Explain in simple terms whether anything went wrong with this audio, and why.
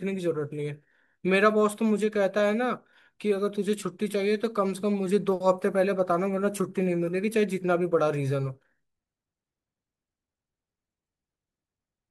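Nothing went wrong with this audio, since no fault can be heard anywhere in the recording.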